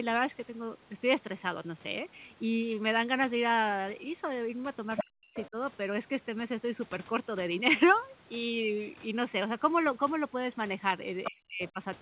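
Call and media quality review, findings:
Other side's voice leaking through: short bursts of a second voice at 4.96–5.05 s (roughly level with the talker), 5.34–5.48 s (well under) and 11.24–11.31 s (a touch under). Likely residual loudspeaker echo the echo canceller didn't fully subtract from the mic.

Speech suppressed in double talk: talker drops hard, down around 40 dB, over 5.06–5.57 s and 11.3–11.8 s, roughly 400 ms hit each time, overlapping the leaks. Likely the echo canceller couldn't tell near-end speech from echo and ducked everything.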